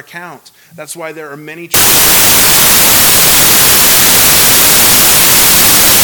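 From 1.74 s to the end, the samples are built from the wrong bytes: the decoder assembles each sample's bytes in the wrong order or from a shifted starting point, so the rapidly fluctuating low-order bits end up as the most significant part of every value. The result is a sudden wall of loud, harsh, broadband noise, close to white on the louder sounds.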